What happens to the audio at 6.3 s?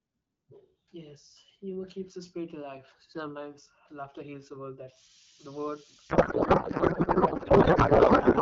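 At 6.3 s the clip is inside a codec payload misread that runs from 6.09 s to the end at 8.41 s. The decoder takes the AMR-WB frames with their bits shifted, which fits octet-aligned packing being read as bandwidth-efficient, so the clear 12.65 kbit/s speech turns into garbled noise and warble that barely tracks it. On a spectrogram the harmonic stripes and formants give way to smeared, noisy texture, and the waveform envelope stops following the syllables.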